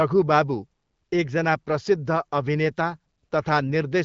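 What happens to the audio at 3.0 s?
Nothing goes wrong at 3.0 s: the speech there comes through intact, carried by the AMR wideband (HD Voice) codec at 12.65 kbit/s with no break or added fault at that moment.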